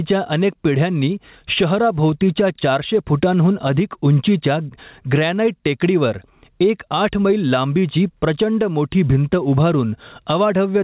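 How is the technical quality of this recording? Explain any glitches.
The quality is hurt by gain pumping that runs through the whole speech clip. The gain swings by about 15 dB, pulled down under every loud syllable. Loud and soft passages sit unnaturally close in level, so the sound feels squashed. The likely cause is microphone gain set far too high, with a fast limiter or compressor clamping down on each peak. The audio also carries nothing above 4 kHz, consistent with a G.711 mu-law call codec.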